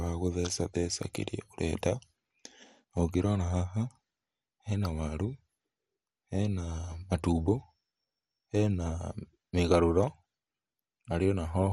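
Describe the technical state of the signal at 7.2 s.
MP2 compression is present at 7.2 s and throughout the clip. It is likely the cause of what can be heard there: coarsely quantised sub-bands, nothing above 15.1 kHz, and a dull, gurgling, granular quality in the speech, which fits a low rate of about 64 kbps.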